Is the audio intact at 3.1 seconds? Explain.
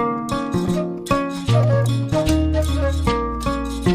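Yes, the audio is intact at 3.1 seconds, with no dropout, click, distortion or other fault to be heard at that point.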